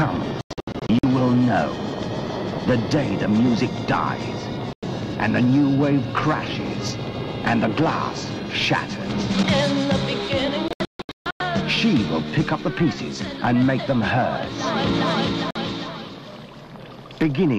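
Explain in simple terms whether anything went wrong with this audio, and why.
The sound keeps dropping into brief silences: a scatter of short holes from 0.41 to 1.04 s, a gap from 4.73 to 4.83 s, more holes from 10.68 to 11.41 s, and a blip at 15.51 s. This is digital broadcast dropout. The receiver lost clean signal, muted, and resumed, so that audio is gone.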